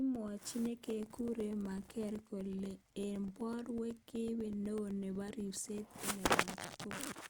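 Speech clip with periodic USB or driver dropouts from 0.16 to 7.16 s: about 2 ms of audio drops to silence every 0.125 s, giving regular ticks, seen as evenly spaced waveform gaps and thin vertical spectrogram lines.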